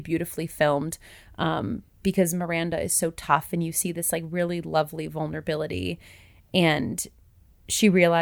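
No technical faults can be heard anywhere in the clip.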